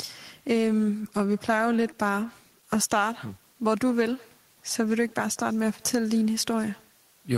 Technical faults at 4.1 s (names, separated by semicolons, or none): echo with no canceller